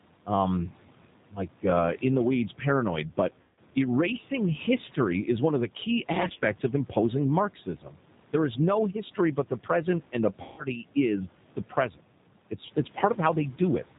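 Speech recording carried over the 8 kbit/s G.729A codec throughout, with a hard band edge and a rough, slightly synthetic texture. The decoder rebuilds each 10 ms frame from a vocal tract filter, a pitch predictor and a handful of pulses, so on a spectrogram nothing appears above 4 kHz and the harmonics look smeared and grainy rather than cleanly striated. The room noise, sitting about 21 dB below the speech, comes through with a warbling, watery character. VoIP packet loss concealed by the speech codec occurs three times. From 3.41 to 3.59 s, just after "the weeds paranoid but" and before "erasing history is one", about 160 ms is missing, which fits eight 20 ms packets. The decoder extends its last pitch and filter into a stretched sound that fades, seen as a decaying envelope in the waveform. Between 6.22 and 6.44 s, about 80 ms is lost in short gaps of no more than 20 ms each, scattered over 200 ms, giving a weakened stretch. 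From 10.42 to 10.65 s, after "and the", another 160 ms gap produces the same stretched, fading sound and a slow recovery. At 7.83 to 7.95 s, just after "of imposing", there is speech cut by the noise suppressor. For roughly a tenth of a second the level dips by about 9 dB, so the sound there comes out swallowed and faint. This shows as a thin, darkened notch in the spectrogram and a sunken patch in the waveform.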